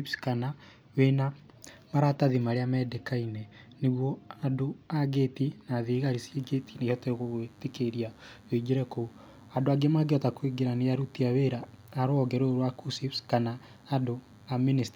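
From about 5.93 s to the end of the speech there's DECT cordless phone buzz: a nearby handset or base fires a radio burst every 10 ms, and the audio circuit rectifies it into a thin, steady 100 Hz buzz full of harmonics. It sits quietly, well under the speech.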